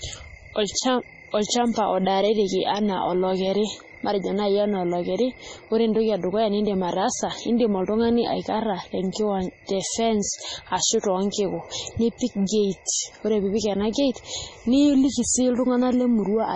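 Throughout the speech, heavy MP3 compression is the likely cause: starved of bits, the encoder cuts everything above 10.4 kHz and drops weak frequency lines frame by frame, which fits a very low bitrate near 24 kbps. The result sounds dull, watery and swirling, with chirpy s sounds and smeared onsets.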